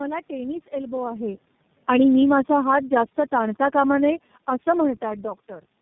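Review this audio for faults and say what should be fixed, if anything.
Tandem speech coding runs through the whole clip. The speech has nothing above 3.5 kHz and has the rough, muffled, warbling texture of a voice decoded and re-encoded several times in a row, each low-rate coder building on the last one's errors. This points to a chain of three speech codecs, likely ending in iLBC. A single narrowband codec would sound band-limited but cleaner. The compounded roughness is what marks it as tandem coding. Keeping the call in one codec end to end, or passing it through without transcoding at each link, would prevent this.

Automatic gain falling begins at 1.75 s, just after "टेनिस एल्बो आहे", and continues to 5.03 s. The level sinks by about 5 dB as the gain control, having judged the input too loud or its background noise too strong, pulls its gain down gradually. The background sinks with the speech, which distinguishes this from the talker moving relative to the microphone around 1.0 s and 5.0 s, where the room noise would stay put. 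Setting a lower fixed input level, or slowing and limiting the AGC's downward range, would prevent this.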